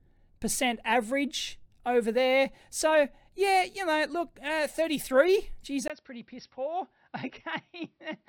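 At 5.88 s the speech drops out for about 20 ms, and from there to the end the sound is narrower and duller. Nothing remains above 5.7 kHz, the level falls by roughly 10 dB, and a new noise floor appears well below the signal. This pattern points to an input switched to a poorer device, likely a change of microphone or a move to a headset's call profile, bringing its own band limit, tone and background noise.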